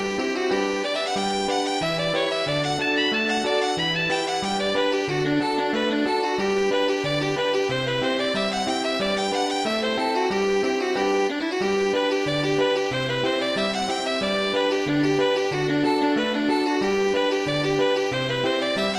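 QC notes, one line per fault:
No faults heard.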